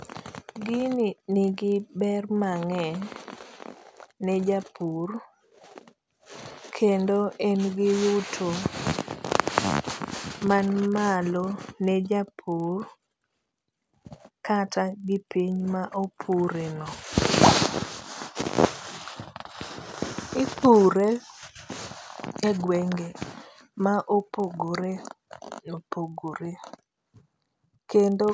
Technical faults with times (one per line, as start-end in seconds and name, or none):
0.80-28.33 resampler restarted on every block